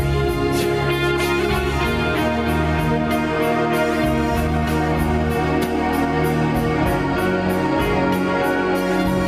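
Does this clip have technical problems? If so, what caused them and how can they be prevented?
Yes. Gain pumping runs through the whole piece of music: the gain dips by around 5 dB under each loud hit. This is likely from input gain set far too high, with a fast limiter clamping every peak. Unlike a noise gate, the quiet passages never drop to silence; they rise. Prevent it by lowering the input gain so peaks sit below the limiter's threshold.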